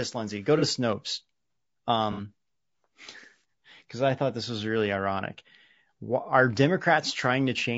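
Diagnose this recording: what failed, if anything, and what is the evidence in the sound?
Low-delay AAC compression runs through the whole recording, a codec-stage fault. The speech sounds rough and grainy, with noise filling the gaps between pitch harmonics and a thin, synthetic-sounding top band. The likely cause is AAC-ELD at a low rate, which fits something near 32 kbps. Its short frames resolve harmonics poorly and consume bits, so too little remains to code fine spectral detail cleanly.

AAC frame loss with concealment occurs at 0.59 to 0.63 s and again at 2.12 to 2.21 s. It is a network or transport fault that the decoder papers over. Each gap sounds like a brief smeared, noisy or phasey patch in the speech. The first lasts about 30 ms, which fits one lost frame, and the second about 60 ms, which fits two. The decoder rebuilt each from the last good spectrum.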